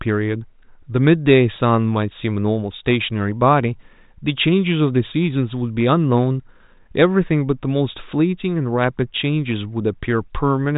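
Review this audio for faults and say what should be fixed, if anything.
Nothing to fix: the speech comes through a G.726 ADPCM telephone path at 40 kbit/s with the band stopping near 3.8 kHz, and no fault is audible.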